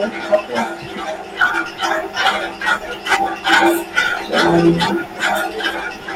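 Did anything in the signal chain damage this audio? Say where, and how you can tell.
Yes. There is hard clipping at 0.34 s and again from 4.37 to 4.83 s. Both are on loud speech peaks, which were driven about 4 dB past what a gain stage, the converter or a sample-format conversion could hold. The tops of the waveform were cut flat there. Those flat tops add harmonics high in the spectrum. The short event is a brief crackle. The longer one crackles on its peaks for almost half a second.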